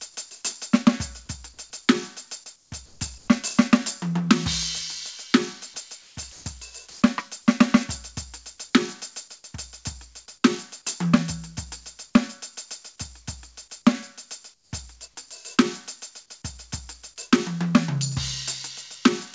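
Gain pumping runs through the whole music clip: the level swings by roughly 5 dB as a fast limiter, likely behind an over-high input gain, ducks each loud passage, so the waveform envelope looks flattened and breathing.

Comfort noise in place of the background appears at 2.56, 2.86, 3.18, 6.02, 6.90 and 14.54 s, each lasting 100 to 180 ms. The quiet background between loud moments, about 27 to 36 dB down, is likely swapped for smooth synthetic noise from discontinuous transmission. It is mostly about 4 to 9 dB quieter, level at 3.18 s and about 3 dB louder at 6.90 s. On a spectrogram, the textured floor turns into a uniform, featureless band.

Sound dropped by the voice detector occurs from 6.32 to 6.46 s, when about 50 ms of music is likely misjudged as background and replaced by steady noise. It shows as a brief gap in the waveform's detail. Above 8 kHz the spectrogram is empty throughout, which fits the G.722 call codec.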